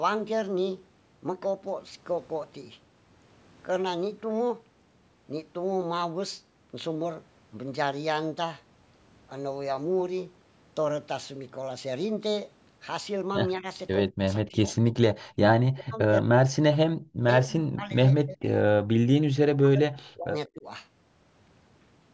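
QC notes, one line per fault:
13.58–14.93 s, speech suppressed in double talk: the voice ducks in four short bites (13.58–13.65, 14.1–14.25, 14.41–14.64, 14.81–14.93 s). The first is a shallow dip of about 10 dB, the rest drop roughly 40 dB. Likely the canceller clamping down while both ends talked.
15.23–15.37 s, background gated by the echo canceller: the room tone vanishes for about 150 ms, down about 40 dB, while the canceller holds the mic down against loudspeaker playback, then snaps back.
15.7–17.1, 17.43–18.48 and 19.56–20.66 s, speech suppressed in double talk: longer stretches, around a second each, where the voice sinks roughly 40 dB and breaks up, likely the same double-talk suppression.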